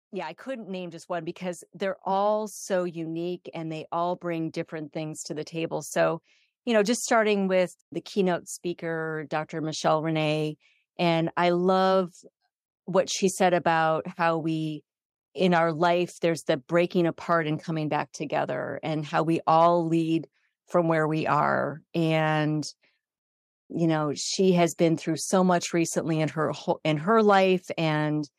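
At 1.02 s, between "yeah I couldn't name" and "one because they're", the microphone volume stepped up by about 5 dB. Another step of about 2 dB follows at 5.16 s, after "they all bring different". Each time the input level was raised at once, so the speech and the background jump louder together.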